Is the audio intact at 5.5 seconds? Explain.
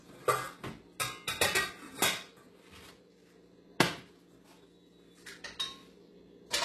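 No. At 5.5 seconds the sound carries heavy HE-AAC compression damage, present through the whole clip. Nothing is heard above 12.3 kHz. The treble that remains sounds rebuilt rather than captured, likely from spectral band replication, where lower bands are copied upward and shaped by a coarse envelope. Its harmonics do not line up with the lower range, so high content turns gritty and metallic. The damage fits a very low bitrate, around 16 kbps.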